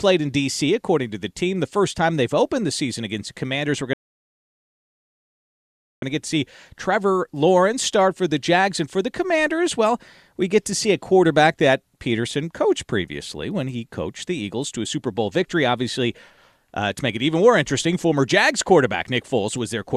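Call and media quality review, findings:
Speech cuts to dead silence at 3.93 s, resumes at 6.02 s on "to get to see" with nothing missing, about 2.1 s added. Rebuffering stall: player buffer ran dry, waited for download.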